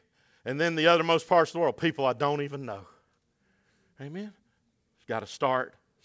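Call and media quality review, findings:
No faults found in this speech clip.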